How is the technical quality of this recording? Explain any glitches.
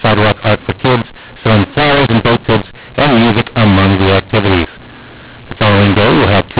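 Poor: the whole recording carries one persistent decoding fault on top of ordinary narrowband telephone audio, band-limited below 4 kHz by its 8 kHz G.711 coding.

Throughout the speech, mu-law and A-law are mixed up. Samples encoded as mu-law are decoded as A-law, scrambling levels, so speech sounds harsh and distorted and pauses fill with noise.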